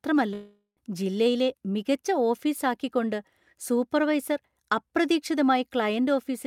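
A speech clip with a long network dropout from 0.33 to 0.79 s: the last sound smears into a fading buzz, then about 110 ms of near-silence, and roughly 400 ms of speech is lost. The likely cause is packet loss. A spectrogram shows smeared, decaying bands, then a blank gap. Speech resumes about 30 ms late.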